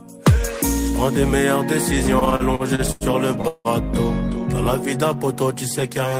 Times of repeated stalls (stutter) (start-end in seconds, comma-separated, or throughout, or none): 2.19-3.68